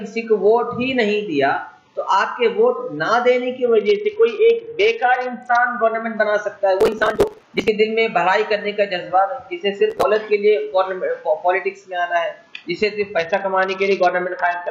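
The audio has two Bluetooth SBC bit pool drops, from 3.64 to 6.17 s and from 13.18 s to the end. The treble dulls and gritty noise rises, which fits the bit pool falling from 28 to about 7, near 66 kbps. Processor overload crackle tears through it from 6.81 to 7.68 s and from 9.90 to 10.03 s, where short buffers of roughly 10 ms were skipped in runs.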